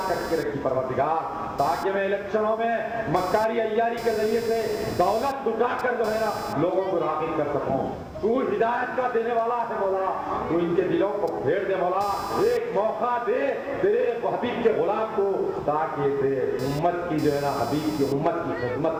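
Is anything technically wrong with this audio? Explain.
Yes. Computer activity noise runs throughout the clip: changing processor, graphics or mouse load disturbs the ground shared with the audio circuit, producing a buzzing, chirping pattern pulsing at around 500 Hz, roughly 20 dB below the sound and following computer activity rather than the audio.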